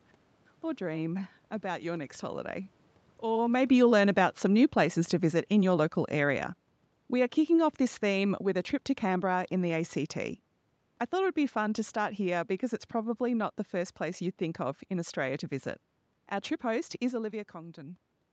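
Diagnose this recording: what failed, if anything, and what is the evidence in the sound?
The automatic gain control in the call processing stage was falling between 3.25 and 6.53 s. Having judged the input too loud, or its background noise too strong, it lowered its gain by about 6 dB over those three seconds, so the speech and the room noise beneath it sink together. On the waveform, the envelope tapers steadily across that span, and the noise floor drops with it. A spectrogram shows the whole band, up to its 8 kHz ceiling, dimming uniformly. This is separate from the talker shifting position around three and a half seconds in.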